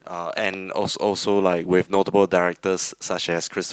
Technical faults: lost packet rebuilt from error correction

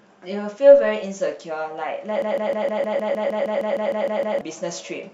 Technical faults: broken-record loop

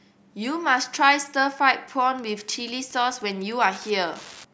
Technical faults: Wi-Fi interference

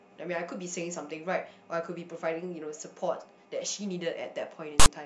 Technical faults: file tags played as audio

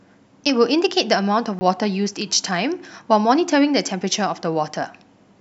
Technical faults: block of digital silence

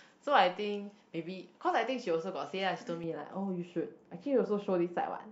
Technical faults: de-emphasis applied wrongly

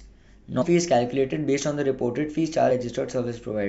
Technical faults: damaged data in a compressed stream

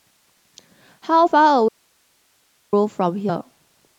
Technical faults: compressed frames skipped; audio dropout to a faint residue

